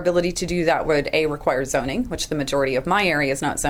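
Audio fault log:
Throughout: clock drift between sender and receiver. The sending end's clock runs fast, by roughly 4 percent, so audio arrives a little quicker than the receiving end plays it out. The jitter buffer therefore fills steadily rather than hovering at one level, forcing the receiver to trim material again and again. Unlike random network jitter, the error never reverses: every correction pushes the same way, and the mismatch persists for the whole clip rather than appearing in isolated bursts.
0.21 to 3.69 s: repeated timing corrections. From just after the start to the end, the receiver keeps dropping short slivers of audio to catch up with the faster sender, leaving the stretch running at 104 percent of its natural pace. Each cut is tiny, heard as a faint hiccup or slightly hurried, uneven tempo rather than a gap or click. What separates this from packet loss concealment is the absence of silences or smeared fills, and the spacing is irregular.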